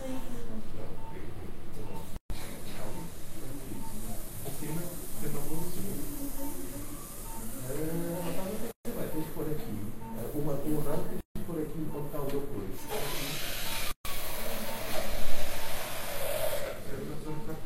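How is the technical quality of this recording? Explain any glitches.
The recording has four gaps at joins of encoded pieces, at 2.16, 8.71, 11.21 and 13.91 s, lasting about 137, 136, 151 and 137 ms. Separately encoded segments were spliced untrimmed, so each piece's encoder start delay and final-frame padding remain as silence. The sound cuts out abruptly, then resumes exactly where it stopped. A waveform shows flat, empty stretches, and a spectrogram shows blank vertical bands with slightly smeared edges.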